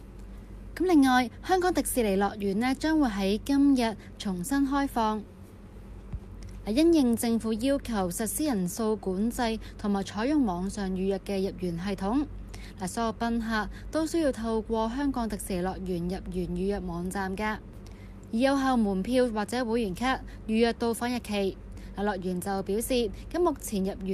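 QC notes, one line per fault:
Nothing stood out on listening.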